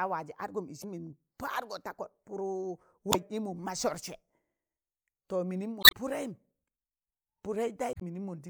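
Short blips break into the speech at 0.80–0.85 s, 3.10–3.15 s, 5.80–5.93 s and 7.92–8.02 s, the third and fourth lasting a little longer. These come from damaged data in a compressed stream: at each point some of the encoded bytes were lost or corrupted, so the decoder misread those frames, lost its lock on the frame structure, and had to hunt for the next valid frame header before clean audio resumed.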